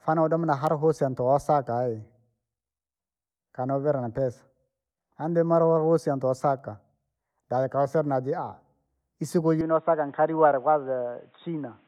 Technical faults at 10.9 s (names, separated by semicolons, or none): input switched to a poorer device